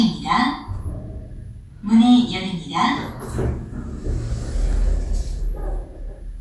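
Nothing in the audio stood out as a technical problem on listening.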